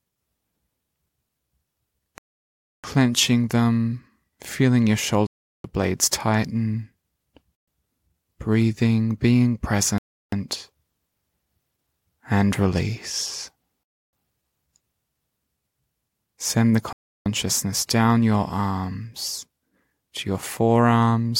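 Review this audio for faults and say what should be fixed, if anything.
Bluetooth stalls occur at 2.18 to 2.84 s, 5.27 to 5.64 s, 7.55 to 7.68 s, 9.98 to 10.33 s, 13.83 to 14.13 s and 16.93 to 17.26 s. The speech drops to full silence for between 0.12 and 0.66 s each time, then resumes where it left off. The likely cause is radio interference delaying packets until the headphones' buffer emptied, so playback paused until retransmitted data arrived. Keeping the phone close to the headphones, away from Wi-Fi and other 2.4 GHz sources, would prevent these dropouts.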